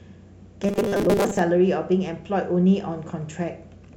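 From 0.64 to 1.39 s, audio likely arrived too seldom, so short 5 ms buffers repeated over about half the audio, producing robotic sound with a metallic 200 Hz buzz.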